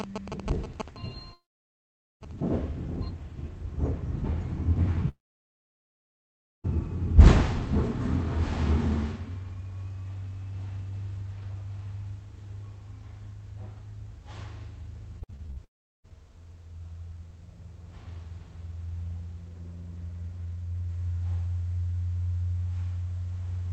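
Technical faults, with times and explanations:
1.33–2.23 s, 5.09–6.66 s and 15.64–16.06 s, long network dropout: each time the sound smears into a brief fading buzz and then goes silent for about 0.83 s, 1.49 s and 0.37 s. It resumes later with the missing stretch (0.88 s, 1.56 s and 0.4 s) gone. The likely cause is that no audio arrived over the call path, so the receiver stretched the last fragment briefly and then fell quiet until packets returned.
15.20–15.58 s, repeated packet loss (robotic sound): the sound turns choppy, breaking up six times in under half a second. The longest hole is 58 ms, and about half of this span is patched rather than real. Packets kept going missing or arriving late, and each gap was filled by extending the previous sound. Those synthetic fills coming back to back give the robotic stutter. Right after it comes the last dropout.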